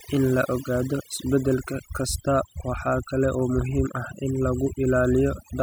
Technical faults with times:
0.00-5.63 overdone noise removal

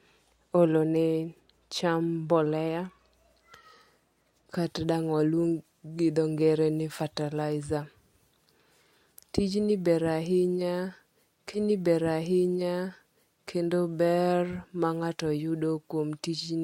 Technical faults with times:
4.53-16.64 pre-emphasis left on
11.53-13.53 stream segment repeated

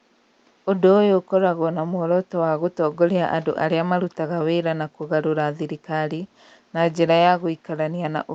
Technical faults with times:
none

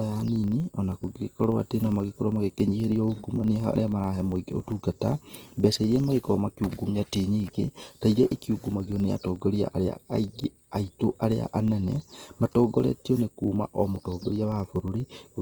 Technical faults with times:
0.00-15.42 USB whine
0.00-15.42 Opus compression
0.00-15.42 filter restarted on every block

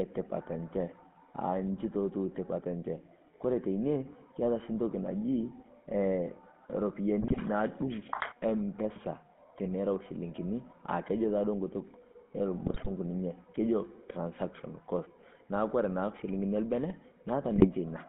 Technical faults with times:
0.00-18.09 GSM full-rate codec
7.21-7.40 GSM bit errors
12.66-12.93 GSM bit errors
17.56-17.67 GSM bit errors

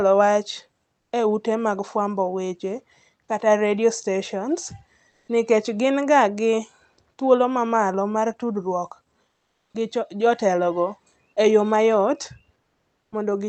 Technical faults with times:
5.10-5.28 comfort noise in place of the background
9.30-9.74 comfort noise in place of the background
12.62-13.12 comfort noise in place of the background

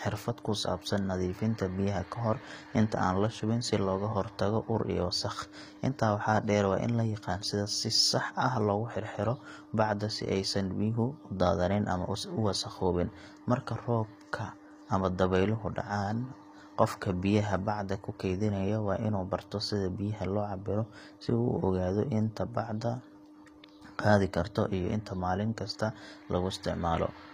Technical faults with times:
0.00-27.33 HE-AAC compression

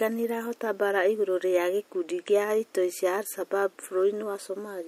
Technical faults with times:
none

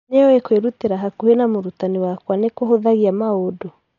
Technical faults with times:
0.00-3.99 Dolby Digital compression

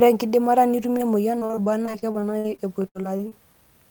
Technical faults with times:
0.97-1.01 short concealed packet loss
1.39-3.33 repeated packet loss (robotic sound)

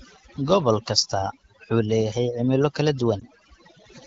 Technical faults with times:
0.00-4.07 overdone noise removal
0.77 dropped samples
3.20-3.23 lost AMR speech frames

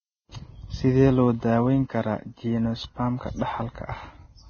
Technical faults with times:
0.00-4.50 Vorbis compression

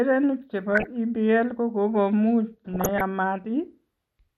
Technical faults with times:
0.00-4.37 MP2 compression
0.72-0.87 DAB burbling
2.73-3.01 DAB burbling

